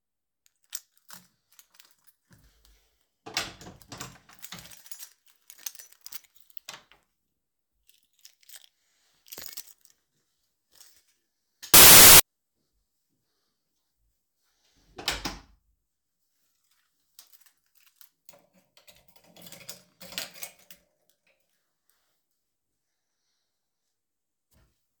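A clip of sounds, with one fault: from 11.74 to 12.20 s, samples are built from the wrong bytes, so the jumpy low bits dominate and you get a burst of loud, harsh broadband noise.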